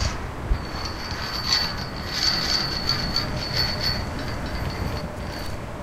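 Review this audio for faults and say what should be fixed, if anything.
From 2.35 s to 5.01 s every sound repeats about 300 ms later at roughly equal loudness, a dry, full-band doubled audio track that switches on and off abruptly. The likely cause is a second, slower capture path or an out-of-step edit mixing the same signal in twice. To prevent it, route each source through only one capture path and check edits for overlapping duplicate regions.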